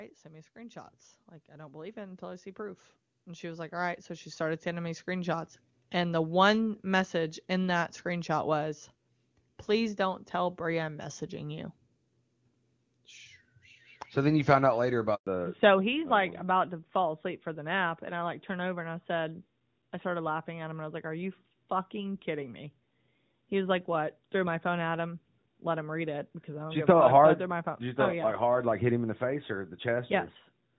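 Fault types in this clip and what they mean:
Automatic gain rising: The automatic gain control decided the input was too quiet and turned itself up slowly, so voice and background swell together by about 16 dB. It starts just after "send me" at 0.53 s and settles around 5.6 s.
Handover gap: The call got passed from one network to another, and no speech frames came through during the switch. Right after "you found out later" the sound dies away at 15.15 s for 120 ms, and whatever was said there is simply gone.
Fallback to narrowband: Straight after that gap, at 15.27 s, the call drops from HD Voice to an older narrowband codec, most likely narrowband AMR at its top rate. From there to the end nothing above 4 kHz survives, so the voice turns duller and rougher.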